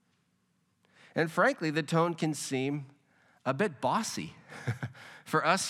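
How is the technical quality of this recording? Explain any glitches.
No technical glitches are audible in this recording.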